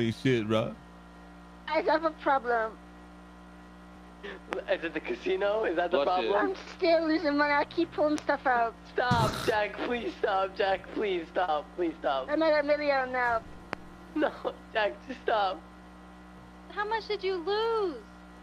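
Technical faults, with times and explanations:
4.53–4.55 s, 8.18–8.20 s and 13.73–13.75 s: loud pop, three single sharp pops about 15 to 20 dB above the sound, which carries on underneath, likely from a voltage pulse such as static or a switching glitch. Each shows as a tall spike on the waveform and a thin full-height stripe on the spectrogram.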